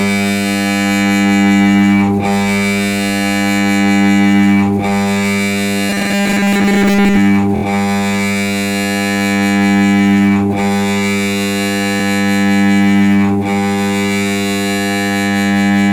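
From 5.90 to 7.17 s the audio takes on a robotic sound, a rigid 200 Hz buzz, likely from repeating 5 ms buffers. A spectrogram shows evenly spaced harmonic lines. At 7.55 s a 24 ms block plays three extra times (72 ms added), and at 11.99 s once more (24 ms). These repeated frames show as identical waveform segments.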